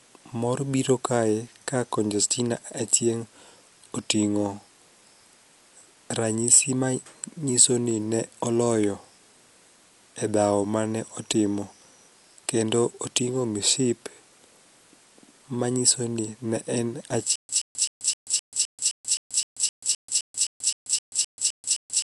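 Speech recorded with a coarse, band-limited codec sound throughout: nothing reaches above about 11.4 kHz, so the voice is dull, and plainly audible rough, fluttering noise sits around the tonal parts where the encoder ran out of bits and the decoder filled empty spectral lines with noise. This is likely Dolby Digital compression, and the damage fits a low bitrate in the region of 64 kbps, where the encoder narrows the band and leaves many frequency lines without mantissa detail. From 17.36 s, right after "manyiso ni ne en", a stutter with silent gaps takes over and runs to the end. A 124 ms fragment repeats 18 times at a steady 259 ms period, each followed by about 135 ms of digital silence. This is likely a stalled player or stream replaying its last buffered piece at each retry and then running dry, so the audio that belonged in that span is lost.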